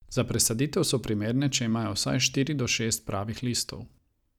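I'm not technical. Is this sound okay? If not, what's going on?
No. At 1.04 s, between "presaditev so" and "primerne če imajo vsaj", there are lost LE Audio frames: a roughly 10 ms dropout, consistent with one missing frame. The wireless decoder fills it by reusing the previous sound with scrambled detail.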